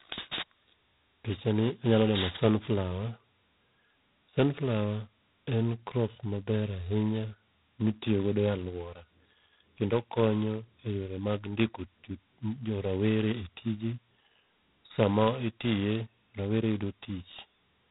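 The whole clip carries G.726 ADPCM damage. The speech has a harsh, rasping hiss that rises and falls with its level. That heavy noise fits 16 kbit/s, just two bits per sample of prediction error. Nothing passes above 3.9 kHz.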